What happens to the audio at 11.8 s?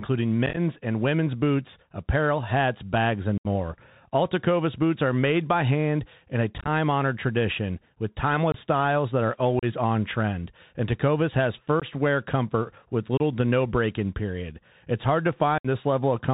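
At 11.80 to 11.84 s there is unconcealed Bluetooth headset packet loss. A handful of short voice packets, about 18.8 ms of speech, never arrived over the headset link, and silence or an idle pattern filled the gap. The result is a brief, abrupt hole with hard edges that can click, and the speech comes back quieter for a moment.

The surrounding speech carries the Bluetooth CVSD headset codec, a narrowband one-bit adaptive-step coding at 64 kHz. It cuts everything above 4 kHz, distorts loud high sounds that outrun the step size, makes s sounds scratchy, and leaves a granular hiss under the speech.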